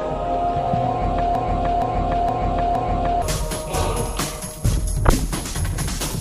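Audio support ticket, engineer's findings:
Broken-record loop, 1.35 to 3.22 s. A 467 ms fragment repeats exactly, four times back to back. Likely a stalled player, encoder or stream resending its last buffered piece. Audio due in that span is lost, not delayed.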